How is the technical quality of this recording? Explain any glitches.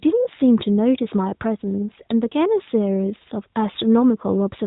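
The technical quality of this recording is sound, with no glitches to explain.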